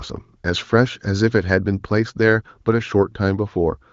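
Nothing stood out on listening to this speech.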